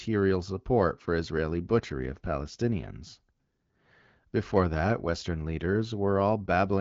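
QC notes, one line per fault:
Nothing to flag here; it's speech carried over an HD Voice wideband call at a rate that fits 12.65 kbit/s, and the codec is working as it should.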